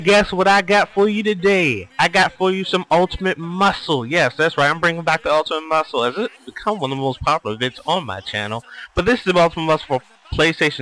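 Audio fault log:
No fault heard anywhere in this clip.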